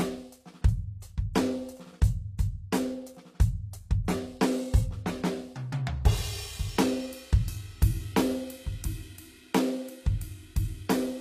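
From start to finish, the music carries plainly audible HE-AAC compression damage, likely from a low-bitrate encode in the region of 24 kbps. The lower spectrum is coded directly, but the treble is synthesised by copying lower bands upward and shaping them with a coarse envelope. Above that crossover the harmonics fail to line up with those below, so high-frequency content sounds bright yet gritty and metallic rather than natural.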